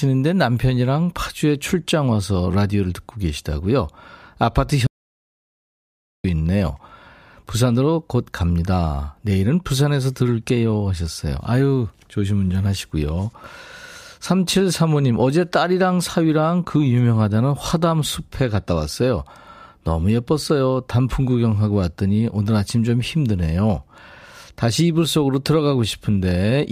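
The input feed to the recorder likely dropped out, through a lost connection or a brief mute, and silence was written instead. In this speech recording an audio dropout to silence runs from 4.87 s to 6.24 s: the speech stops abruptly, about 1.37 s of dead silence with no room tone follows, and whatever was said then is lost.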